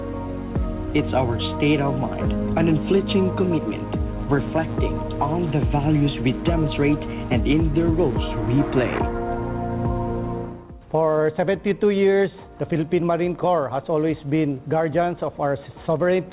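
No faults can be heard anywhere in this recording.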